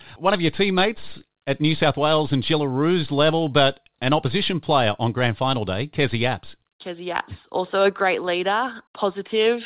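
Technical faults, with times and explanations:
No technical faults can be heard in the speech. It has come through a call path that carries nothing above 4 kHz and adds the usual coding noise, which fits G.711 mu-law at 64 kbps.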